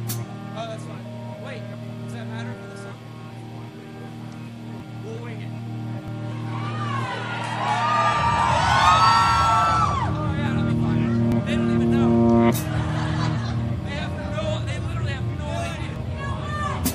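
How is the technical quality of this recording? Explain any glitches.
Four sudden jumps in the sound occur at 4.8, 6.08, 11.32 and 15.96 s, likely from a dropped buffer (overrun). Around 40 ms vanishes each time, around 70 ms at the last. Lost samples leave the audio spliced directly, with no silence, so the waveform shows a sharp discontinuity and the spectrogram a thin vertical line.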